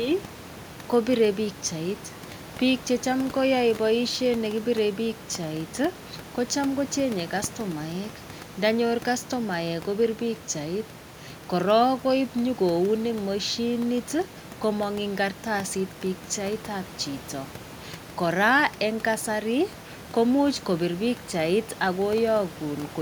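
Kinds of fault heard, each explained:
Nothing in this speech recording points to a fault in the system.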